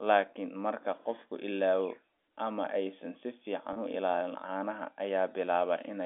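At 3.73 s there's a short dropout of about 30 ms, running to 3.76 s, that gets patched by packet loss with pitch repetition: the receiver loops the last pitch period over the gap, so the speech briefly holds on a slightly buzzy, sustained tone. The length fits roughly three lost 10 ms packets, all on a narrow G.711 telephone line.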